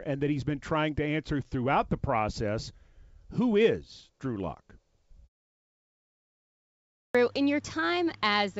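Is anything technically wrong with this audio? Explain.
Yes, there are two faults.

At 6.71 s, after a pause of about 1.5 s, a clipped start after a pause cuts off the first 0.44 s of the returning speech. The output device had gone idle and was still waking when sound resumed, so speech begins abruptly.

From 8.07 to 8.15 s, bit errors on an ADPCM link produce pops and a rough burst with brief level jumps. At a low error rate, each flipped bit throws off the G.722 decoder's step size and predictor, so the damage rings on for several milliseconds. Ordinary packet loss leaves gaps or smoothed fill instead of harsh crackle.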